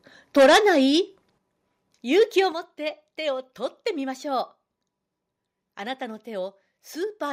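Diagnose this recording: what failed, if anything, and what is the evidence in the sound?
Microphone overload at the converter stage: from 0.37 to 0.79 s the loudest syllables crackle harshly, driven about 10 dB past full scale with roughly a fifth of samples flattened, and milder at 2.19 to 2.4 s, about 2 dB over. The waveform shows flat-topped peaks. The spectrogram shows broadband vertical smearing. The likely cause is excessive input gain squaring off the peaks.

Microphone volume stepped down, likely in call processing: level and background drop abruptly together at 0.39 s (about 2 dB), then at 1.38 s and 2.52 s (about 7 dB each), the last shortly after the second distorted burst. The waveform envelope steps down. The spectrogram darkens uniformly across all frequencies at each instant.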